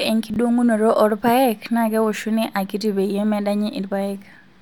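At 0.30 to 0.36 s the speech has chunks out of order: one 20 ms piece turns up two chunks late, so it plays after the two pieces meant to follow it. It sounds like a brief jumble across three hard joins, the sound stepping back on itself. Unlike a dropout or lost packet, there is no gap or silence and nothing is missing; the same material is present, only misplaced.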